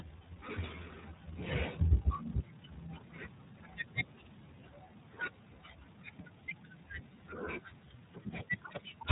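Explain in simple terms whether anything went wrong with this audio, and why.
The whole recording has passed through the iLBC codec, a phone-style voice compressor. It removes everything above about 3.8 kHz, so speech sounds narrow and muffled, and it rebuilds each 30 ms slice separately, leaving a plainly audible rough, synthetic edge from start to finish.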